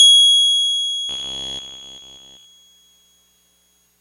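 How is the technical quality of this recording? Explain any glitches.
The music is interrupted by robotic sound from repeated short buffers from 1.09 to 2.46 s. Across that stretch all of the audio is a rigid, metallic buzz at about 66.7 Hz. That fits a likely cause of one 15 ms buffer being replayed because fresh audio arrived too late. Unlike a dropout, there is no silence, and the steady imposed pitch sets it apart from a skip or stutter.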